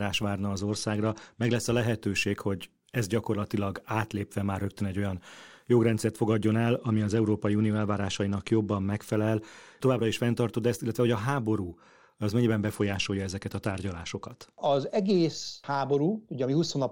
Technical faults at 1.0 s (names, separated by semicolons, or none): Bluetooth SBC bit pool drop